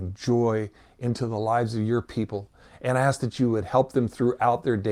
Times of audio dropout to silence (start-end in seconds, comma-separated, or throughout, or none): none